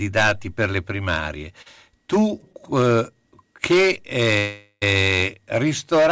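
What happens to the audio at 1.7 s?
Right after "per le primarie", from about 1.62 to 1.68 s, there is a short stall from a late packet. A packet arrived too late, the jitter buffer ran dry, and the receiver stretched the last bit of sound by 38 ms until the packet came in, then carried on from the same point. The result is a briefly held sound with a slight buzz or dip. Unlike packet loss, nothing is skipped; the rest of the speech simply runs 38 ms later.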